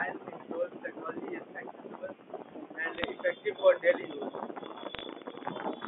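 From 2.95 to 3.10 s the speech picks up a brief burst of bit errors on a digital phone line: flipped bits in the G.711 stream, at a rate well under one percent, each corrupt a single sample, and where a sign or high-order bit is hit the result is a sharp, isolated tick. The errors cluster in a short stretch, which points to a handful of damaged frames, and they sound like a gritty crackle riding on speech that is itself unchanged. The line's telephone band, roughly 250 Hz to 3.5 kHz, carries through intact.

From 3.91 to 5.74 s a train of clicks runs across the audio: around fifteen similar pulses, about 8.8 per second on average but unevenly spaced, peaking about 5 dB above the speech and audible in the gaps as well. This is likely interference from nearby equipment or a struggling interface. Unlike the bit errors, these clicks share one shape and keep up an uneven ticking for almost two seconds.

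From 4.95 to 5.04 s, inside that click train, a second, shorter burst of bit errors adds a sparser scatter of crackle. It is lighter than the first burst and lacks the clicks' uniform shape.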